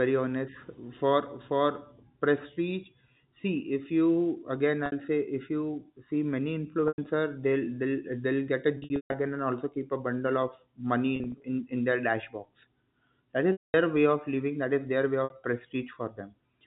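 Right after "if you again", at 4.86 s, there's a 60 ms gap from packet loss with pitch repetition. The receiver loops the last pitch period, so it comes across as a brief buzzy hold. The same happens at 6.88 s for 100 ms. From 8.78 to 9.14 s, 260 ms goes missing in bursts, the longest 140 ms, long enough that the repeat fades towards silence before speech cross-fades back in. From 11.16 to 11.44 s there are short scattered drops, each no longer than 40 ms. At 13.52 s a 220 ms loss fades out, and at 15.24 s a final 60 ms hold can be heard. The dropout lengths fit 20 ms packets. Underneath it all, the G.711 telephone band caps the sound at 4 kHz.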